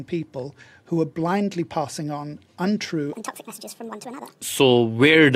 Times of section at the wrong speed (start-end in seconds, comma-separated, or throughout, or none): 3.13-4.41